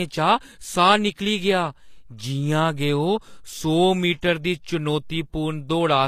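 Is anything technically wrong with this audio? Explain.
Yes. HE-AAC compression runs through the whole clip. The speech has plainly audible coding damage and nothing above 14.9 kHz. The likely cause is a codec that encodes only the lower spectrum and synthesises the treble by copying lower bands upward under a coarse envelope, a trade-off that fits a low bitrate of around 24 kbps. Because that rebuilt top end is not the original, its harmonics fail to align with those below, so s sounds come across gritty, metallic or lispy.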